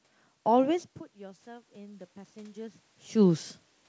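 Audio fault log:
1.19–3.52 s, automatic gain rising: after the input dropped by about 20 dB as the talker moved back around 1 s, the gain control slowly raised its gain by about 6 dB over more than two seconds, so voice and room noise swell together.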